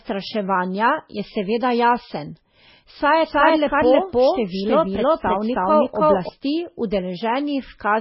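From the start the speech is heavily damaged by what is likely MP3 compression at a very low bitrate, around 16 kbps. Nothing reaches above 5.6 kHz, a flat ceiling on the spectrogram, and sparse flickering patches below it give a watery, swirling sound with smeared consonants.

From 3.25 to 6.29 s a doubled audio track appears, likely a second copy mixed in out of step. It trails by roughly 300 ms at about the same level, so every syllable echoes dryly. The waveform shows repeated envelopes that start and stop abruptly.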